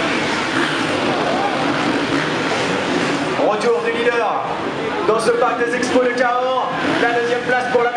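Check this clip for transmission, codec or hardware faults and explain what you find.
Checking this clip turns up no faults to explain.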